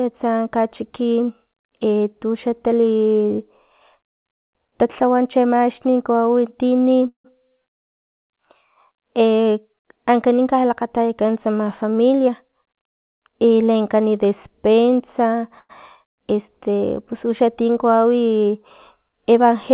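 Speech, carried over a call path that leaves nothing above 4 kHz, which fits G.711 mu-law at 64 kbps. A call audio freeze occurs at 7.08 to 7.27 s. The sound stalls, a fading buzz fills about 164 ms, and about 110 ms of that is silent. It happens again at 15.59 to 15.72 s, where the fill is about 102 ms, with about 40 ms of silence. The likely cause is late packets draining the jitter buffer. The audio then resumes where it stopped, so nothing is lost, but the delay grows. From 11.64 to 13.71 s a jitter buffer speed-up runs the speech at 107% with the pitch unchanged. The buffer held too much audio, so it cut short pitch-period slices, about 150 ms in all. The effect is a hurried passage.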